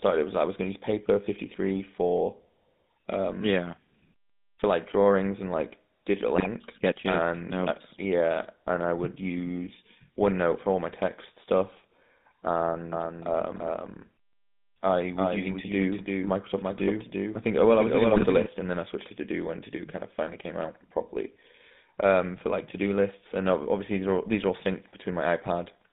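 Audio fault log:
Throughout: GSM full-rate codec. The speech has a buzzy, gravelly roughness. The line passes only about 150 Hz to 3.7 kHz. This codec rebuilds the voice from a vocal-tract model and a coarse pulse excitation, which fits a 13 kbps GSM stream.
6.36–6.47 s and 18.16–18.25 s: GSM bit errors. Each burst turns into brief squawks and gargling. Corrupted filter, pitch or gain values warp the spectrum or spike the level. The lengths fit five and four damaged frames.
12.92–18.46 s: doubled audio track. A second full-band copy trails the original by roughly a third of a second, about 5 dB quieter. It has no room decay and starts and stops abruptly. The likely cause is a slower capture path or a misaligned edit.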